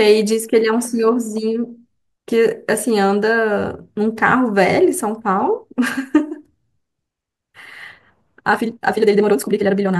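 A time-stretched section runs from 8.5 s to the end of the clip. The pace of the speech abruptly nearly doubles, to about 1.98 times the earlier rate, while the pitch stays where it was, so the last stretch sounds rushed. The likely cause is software squeezing this part to fit a shorter length and holding the pitch steady by dropping short slices of the audio, which leaves the rushed delivery.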